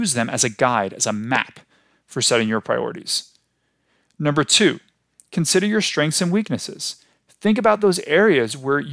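Nothing goes wrong anywhere in this speech recording, so there are no technical faults to point to at any moment along the way.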